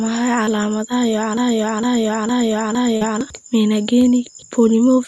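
At 0.45 to 0.49 s there is a brief smear in the speech, a short concealed packet loss. About 20 ms of audio arrived too late for the decoder, and the receiver filled the gap by extending the preceding sound before blending back into the real signal.

From 1.37 to 3.21 s, a broken-record loop takes over. A fragment of about 0.46 s plays four times back to back, identical each time, and the speech that belonged in that stretch never arrives. The likely cause is a stalled player or stream that kept resending the last piece it held.

Near the end of that loop, at 2.97 to 3.03 s, a second short concealed packet loss adds a wobble. This time about 40 ms went missing and was patched with roughly 39 ms of concealment continued from the sound just before it.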